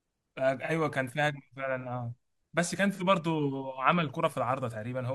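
At 0.65 to 0.71 s, and again at 2.93 to 3.02 s, the speech shows AAC frame loss with concealment. Each gap fits a single lost frame of about 43 ms that the decoder patched by reusing the last good spectrum with its signs scrambled or its energy interpolated. Each gap sounds like a brief smeared, noisy blur. On a spectrogram the harmonic striations turn into a short vertical wash of diffuse energy. In the waveform the envelope carries on but loses its periodic detail.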